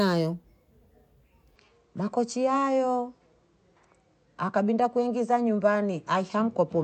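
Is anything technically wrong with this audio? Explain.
Yes. From 1.56 s to the end, the sound turns duller, with nothing above 8.4 kHz. The input likely switched to a poorer device, which passes a narrower band. There is no gap at the switch and the level holds steady. A faint new noise floor appears.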